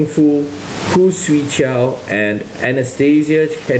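Throughout the speech, the level breathes, with the room noise sitting about 29 dB below the voice and a gain swing of around 20 dB. This is gain pumping, likely from input gain set far too high with a fast limiter or compressor clamping each peak. Dynamics are flattened and the delivery sounds squashed, even with the audio band-limited to 8 kHz through the call path.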